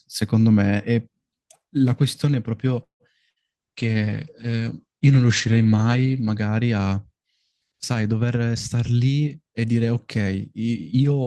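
At 2.83 s the audio stalls in a call audio freeze until 3.03 s. The gap is filled for about 166 ms, the last sound fading into roughly 120 ms of silence, likely because delayed packets let the jitter buffer run dry. When the audio resumes it picks up exactly where it stopped, so nothing is lost and a pause has simply been inserted.

A burst of packet loss follows at 3.30 to 3.39 s. A brief concealed fill of about 60 ms covers the hole, but unlike the freeze, about 60 ms of speech is actually gone. The audio jumps ahead past the missing part instead of continuing seamlessly.

From 3.37 to 7.14 s a call bitrate drop takes the encoder from 32 to 12 kbps and stays at the lowest rate for about 3 s. Bandwidth narrows from 20 kHz to 8 kHz, so the speech turns muffled and coarse. It is a sustained change in tone colour rather than a gap.

Between 8.47 and 9.74 s a jitter buffer speed-up plays the audio at about 111% speed, trimming about 150 ms of accumulated delay. 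The speech sounds hurried while the pitch stays the same, which distinguishes it from a simple faster playback that would also raise the pitch.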